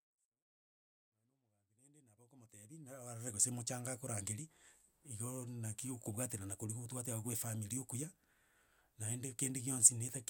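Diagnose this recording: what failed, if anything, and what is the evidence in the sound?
Nothing stood out on listening to this speech recording; the level rises in a smooth, deliberate fade-in from the very beginning until about 3.48 s, with no click or hard edge, and nothing after that drew attention.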